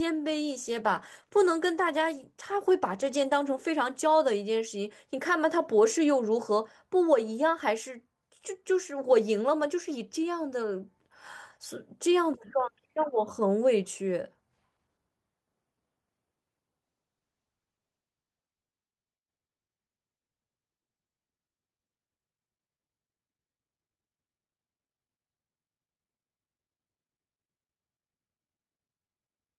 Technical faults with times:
0.57-5.01 call bitrate drop
16.84-24.85 call bitrate drop

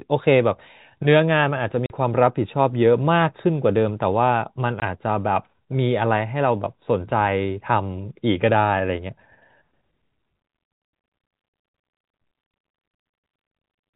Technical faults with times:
1.86-1.90 packet loss filled with silence
4.80-4.82 packet loss filled with silence

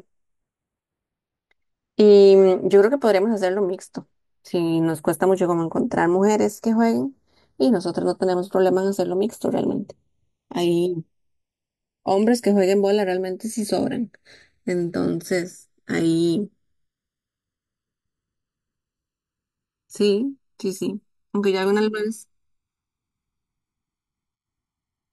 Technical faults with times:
0.00-25.13 channels drifting apart

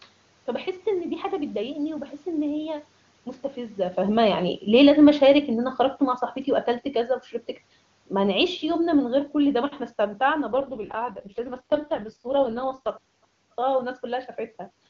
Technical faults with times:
3.98-5.77 automatic gain falling
10.52-12.90 AMR rate drop

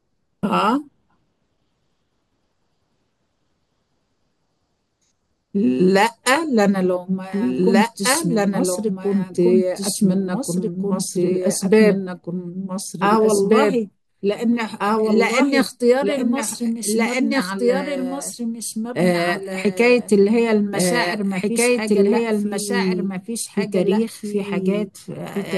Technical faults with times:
0.00-25.57 doubled audio track

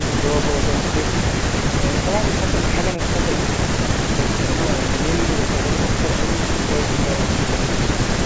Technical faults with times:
none

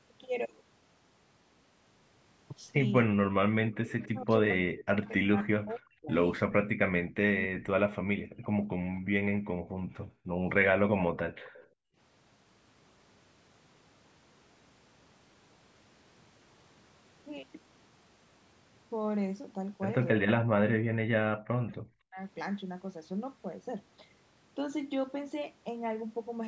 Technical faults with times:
0.17-26.41 clock slip clicks
3.06-8.65 speech suppressed in double talk
4.03-4.08 echo leak
8.96-9.01 echo leak
9.33-10.43 background gated by the echo canceller
11.44-11.65 echo leak
11.65-11.97 background gated by the echo canceller
20.16-22.19 speech suppressed in double talk

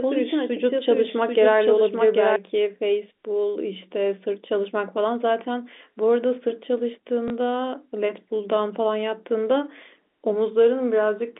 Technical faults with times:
0.00-2.36 doubled audio track
7.28 packet loss with last packet repeated

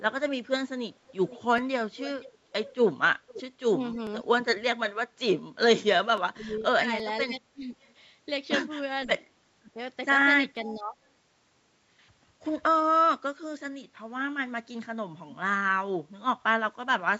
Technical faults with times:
1.10-3.42 echo leak
1.58 dropped samples
3.72-4.27 speech suppressed in double talk
4.07 dropped samples
6.18 dropped samples
6.30-7.75 speech suppressed in double talk
7.00 dropped samples
7.82-7.93 echo leak
9.06-9.26 echo leak
9.07-10.99 speech suppressed in double talk
10.57 dropped samples
10.73-10.80 echo leak

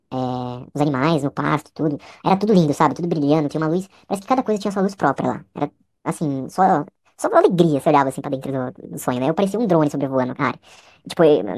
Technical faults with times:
0.00-11.57 wrong sample rate

